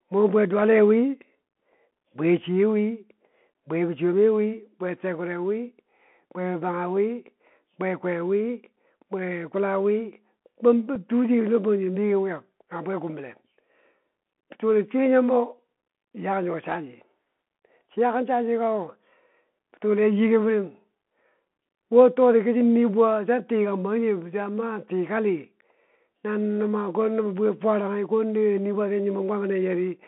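Bluetooth CVSD headset codec runs through this whole speech clip: the sound is confined to a phone-line band of roughly 200 Hz to 3.4 kHz, with a grainy hiss underneath, scratchy sibilants and clearly audible distortion where loud, bright sounds change faster than the adaptive one-bit step can follow, consistent with a 64 kbps CVSD headset link. Unconcealed Bluetooth headset packet loss appears at 10.95 s, where a gap of about 3.8 ms, about one packet's worth, was filled with silence or an idle pattern rather than repaired, leaving a tiny hard-edged dropout.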